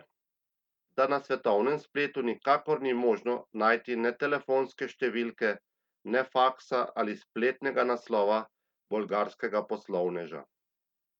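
A speech recording with no technical fault to point to. There is nothing here to time or trace back to a cause.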